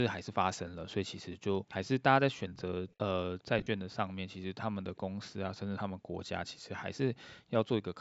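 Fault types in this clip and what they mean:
Echo leak: A faint delayed copy of the sound, trailing by about 408 ms, slips through in three brief scraps at 2.57 s, 2.89 s and 3.39 s, each only some 40 to 60 ms long. The first sits about 25 dB under the speech, the later two fainter still, around 35 and 40 dB down. This is likely a far-end loudspeaker whose echo canceller failed to fully suppress what its microphone picked up, returning a residue.
Lost LE Audio frames: Between 3.59 s and 3.67 s, about 60 ms of audio goes missing in gaps spread over roughly 75 ms, the longest run near 40 ms. Over those gaps the LC3 decoder repeats its last spectrum with randomised signs, so tonal detail dissolves into a brief noisy smear instead of a clean dropout.
Background gated by the echo canceller: From 5.97 s to 6.17 s, roughly 200 ms, the room tone dips sharply, falling by as much as about 40 dB before recovering. 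Here the echo canceller has clamped down on the microphone path while it judged loudspeaker output to be present, then released it. The effect is a short hole in the background ambience.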